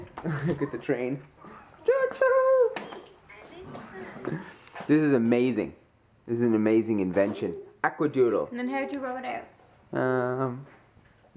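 Nothing stood out as a technical problem on listening.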